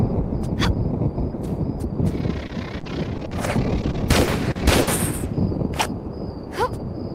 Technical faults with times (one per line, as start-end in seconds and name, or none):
2.47-3.33 repeated packet loss (robotic sound)
3.81-4.89 repeated packet loss (robotic sound)